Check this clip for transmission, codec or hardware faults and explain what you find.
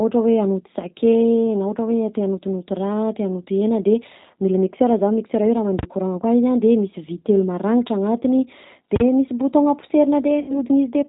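Three faults are present: low-bitrate codec coding throughout, a full-scale numeric failure, and a concealed packet loss near the end.

G.729 codec, whole clip: the speech passed through a CELP coder that fits 8 kbit/s G.729A. It rebuilds each frame from a vocal tract filter, pitch predictor and sparse pulses, and removes everything above 4 kHz. The speech sounds plainly band-limited, rough and slightly synthetic.

Invalid numbers at full scale, 8.96 to 9.00 s, right after "maragnitra agnatiny": a processing stage produced infinite or invalid values, and these were clamped to maximum amplitude for a 40 ms block. The output is pinned flat at one extreme value, far beyond the speech peaks, which is heard as a sharp, very loud bang.

VoIP packet loss concealed by the speech codec, 10.40 to 10.59 s: about 80 ms of audio went missing, which fits four lost 20 ms packets. The decoder extrapolated from its last pitch and filter state with falling gain. 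The sound smears into a fading buzzy tone or coloured noise, and the speech stays weak or distorted until the state recovers.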